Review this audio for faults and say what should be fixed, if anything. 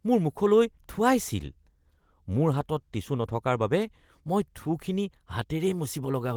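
Nothing needs fixing: the speech comes through the Opus voice path in hybrid mode at 20 kbps with fullband bandwidth, content reaching up to about 20.2 kHz, and only light coding damage.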